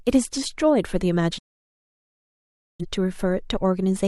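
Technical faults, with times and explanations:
1.38 to 2.85 s, digital broadcast dropout: the speech fades to silence within about 8 ms and stays muted for roughly 1.4 s, because the receiver stopped decoding when frames went missing or failed their checks. The programme resumes later, and the material sent during the gap is gone.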